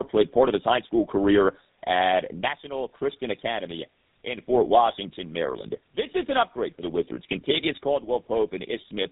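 Tandem speech coding affects the whole clip. The speech passed through two low-rate speech coders in a row, the last consistent with GSM full rate. Each one re-coded the damage left by the previous one. Nothing reaches above 3.8 kHz, and the speech sounds rough, muffled and warbly.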